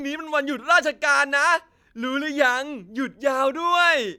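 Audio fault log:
Nothing to log for this one, as there's no technical fault to point to anywhere in this bit of speech.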